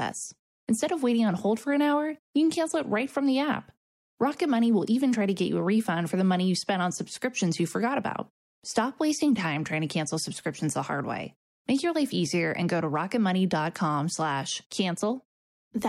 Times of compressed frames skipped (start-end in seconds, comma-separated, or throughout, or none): none